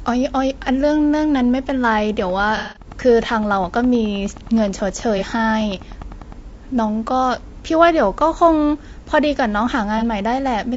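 Throughout, the speech sounds rough and grainy, with noise between harmonics and a dulled top band, likely from low-delay AAC compression (AAC-ELD) at around 32 kbps.

From 2.19 to 6.33 s a train of clicks, around forty at a regular 9.7 per second and about as loud as the speech, ticks over everything, likely from interference or a faulty connection.

AAC frame loss with concealment causes a smeared, noisy gap from 2.57 to 2.86 s. The decoder filled 180 ms from the last good spectrum, which fits several lost frames in a row. Shorter 30 ms patches follow at 5.18 to 5.23 s and 9.98 to 10.03 s.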